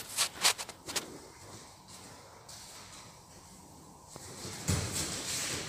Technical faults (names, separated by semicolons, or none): loud pop